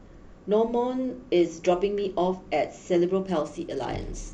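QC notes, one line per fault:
3.27–4.33 s, Bluetooth SBC bit pool drop: The speech suddenly loses its treble and turns dull. A gritty noise rises under it and lasts to the end. The sound fits the encoder cutting its bit pool from about 28 to 11, near 90 kbps, to keep a congested link alive. The top sub-bands then get few or no bits. The remaining bands are coarsely quantised, which causes the grit.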